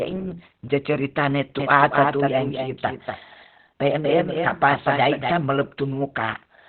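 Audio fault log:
Throughout: Opus compression. The speech is muffled and hoarse, with nothing above about 4.2 kHz. This narrowband, heavily damaged sound fits a low rate near 12 kbps. It likely comes from Opus running in its SILK speech mode.
1.59 to 5.31 s: doubled audio track. A second full-band copy of the speech trails about 200 ms behind, roughly 5 dB quieter. It has no decay or room colour. It starts and stops abruptly, likely from a second, slower capture path.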